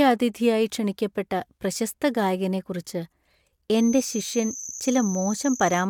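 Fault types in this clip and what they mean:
Feedback whistle: a steady tone at 6.2 kHz runs under the speech from 3.70 s to the end, around 15 dB below it, swelling and fading slowly; likely a speaker-to-microphone loop held just short of feedback, ringing without building into a howl.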